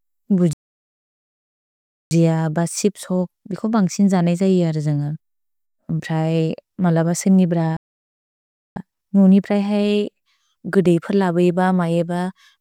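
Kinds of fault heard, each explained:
Playback stall: speech cuts to silence at 0.53 s for about 1.6 s, and after "मलब सिनिब्र" for about 1.0 s; likely the player starved of data or blocked.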